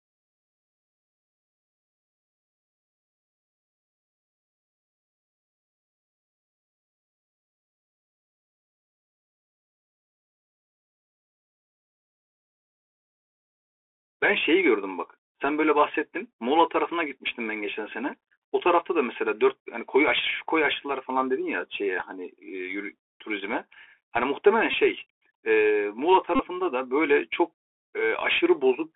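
Speech heard through a Bluetooth CVSD headset codec for the whole clip. The band is squeezed to roughly 300 Hz–3.5 kHz, with scratchy sibilants and granular hiss. A spectrogram shows a hard ceiling near 3.5 kHz, and the sound fits a 64 kbps one-bit-per-sample coder. Bluetooth headset packet repeats occur at 24.71–24.74 s (22.5 ms) and 26.36–26.39 s (37.5 ms). They are heard as brief buzzes near 267 Hz, and the waveform shows identical 3.75 ms cycles, which fits about six and ten lost packets.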